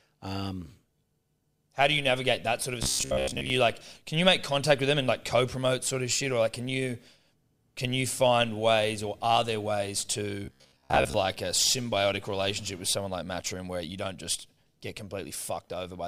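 At 2.83 to 3.50 s, after "that sort of a", and 10.45 to 11.14 s, after "are there ways to", the speech turns into a robotic sound from repeated short buffers: a rigid 66.8 Hz buzz. It is likely caused by starved playback looping roughly 15 ms chunks, so most of the real audio is skipped.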